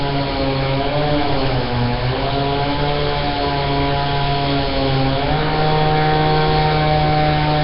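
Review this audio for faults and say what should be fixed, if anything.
The sound was most likely passed through Nellymoser compression, the old Flash microphone codec. It codes short fixed blocks with very few bits per sample, leaving weak bands empty and filling them with noise. Here the damage is heavy throughout: nothing survives above 5.3 kHz, and a rough, hissy haze with a smeared, underwater character clings to everything, which fits a bitrate around 22 kbps. To prevent this, capture or export with a modern codec such as Opus or AAC at an adequate bitrate rather than the Nellymoser path.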